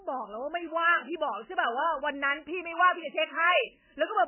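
Speech, with heavy MP3 compression throughout. Nothing survives above 3.1 kHz. The sound is watery, likely from a bitrate near 10 kbps.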